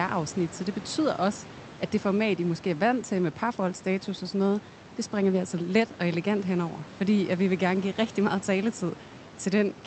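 No technical faults are present in this speech recording. Room noise sits about 19 dB below the voice, and the call path limits the top end to 8 kHz, which fits an Opus link at a moderate bitrate near 40 kbps.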